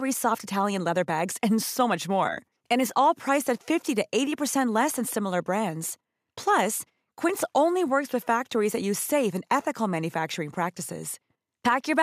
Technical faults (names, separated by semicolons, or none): none